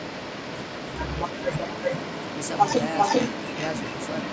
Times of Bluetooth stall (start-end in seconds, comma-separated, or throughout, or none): none